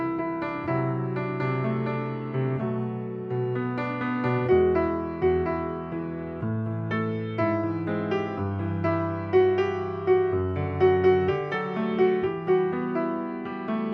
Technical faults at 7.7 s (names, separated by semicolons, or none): none